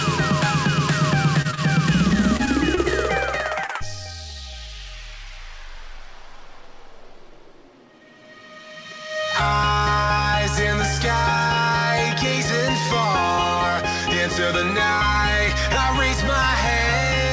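Audio carried over a WebRTC call path, where nothing sounds above 8 kHz, consistent with G.722 at around 64 kbps. At 1.42–1.47 s and again at 1.55–1.59 s the sound hangs on slightly too long with a faint buzz or dip, a short stall from a late packet that left the jitter buffer briefly empty and added about 26–29 ms of delay. At 1.51–1.55 s and 3.66–3.71 s there is a brief smear where about 20 ms of audio never arrived, short concealed packet loss patched by extending the preceding sound. From 2.09 to 2.86 s the audio turns choppy, repeated packet loss (robotic sound) from six separate gaps, the longest 26 ms, with about 11% of that stretch filled in.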